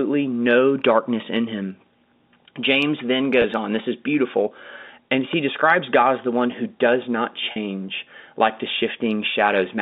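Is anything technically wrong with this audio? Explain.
Yes. There are two kinds of fault in this speech. An electrical switching spike appears at 1.37 s, just after "no darkness", and again at 5.33 s. Each is a sharp snap sitting on top of the speech, most likely from a nearby switch or discharge arcing into the line. Unlike a dropout, nothing is missing underneath it.

Packet loss with pitch repetition occurs at 3.42 s, lasting about 20 ms just before "on this is beautiful", and at 7.52 s, lasting about 40 ms just after "one who does not". The receiver filled each gap by repeating the last pitch period, so the sound holds briefly with a buzzy, frozen quality instead of snapping. The longer gap fits two consecutive lost packets.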